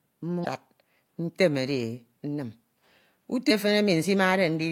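At 0.42 to 0.46 s and again at 3.47 to 3.51 s, the speech breaks up briefly for about 40 ms: damaged data in a compressed stream. Corrupted bytes leave the decoder misreading those frames and losing sync until it locks onto a following frame header. On a spectrogram each event shows as a short disruption cutting across the harmonic pattern, and the waveform shows an abrupt break.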